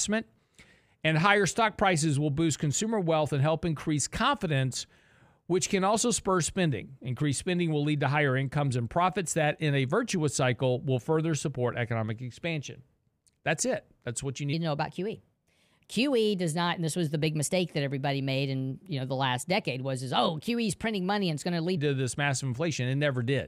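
At 14.53 s, just after "what you", a section at the wrong speed begins and lasts until 21.77 s. That span plays 1.19 times too fast, raising pitch by about three semitones and hurrying the speech, likely from playback against a mismatched clock.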